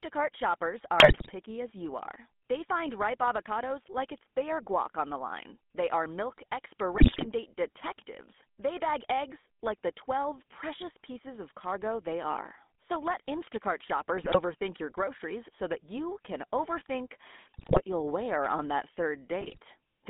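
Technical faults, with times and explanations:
Throughout, GSM full-rate codec: the speech is squeezed into a 200 Hz to 3.5 kHz band, which fits a 13 kbps full-rate stream, with plainly audible buzzy, gravelly roughness from the pulse-driven vocal-tract model. A spectrogram shows nothing above 3.5 kHz and coarse, smeared harmonics.
1.0–1.31 s (just before "as you are"), 6.94–7.26 s (between "are milk" and "date detectives"), 14.16–14.39 s, 17.54–17.82 s (between "that you can overthink" and "you'll wear on that"), 19.4–19.59 s, GSM bit errors: corrupted filter, pitch or gain values break the speech into squawks, pops and gargling for several consecutive frames. They appear as blotchy spectral smears or level jumps in each short stretch.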